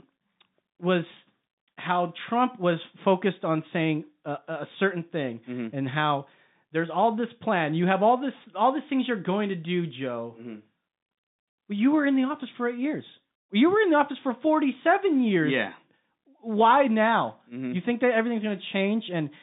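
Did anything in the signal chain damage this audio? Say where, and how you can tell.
No, nothing in the chain damaged this audio.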